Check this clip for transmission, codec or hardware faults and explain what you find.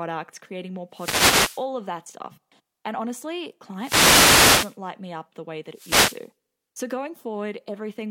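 Three wireless microphone noise hits, from 0.91 to 1.66 s, 3.77 to 4.78 s and 5.70 to 6.30 s. Each time the analogue FM radio signal fades as reflected paths cancel, so receiver noise rises and a brief swish of static sweeps over the speech.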